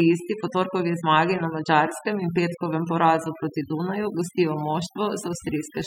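From the very start and all the way through, you can hear overdone noise removal on this speech. The denoiser was pushed far too hard, so any frequency band sitting close to its idea of the noise floor gets pulled down hard or shut off. The gaps between phrases drop to near silence sprinkled with little twinkling specks, and the softer parts of the voice get swallowed too.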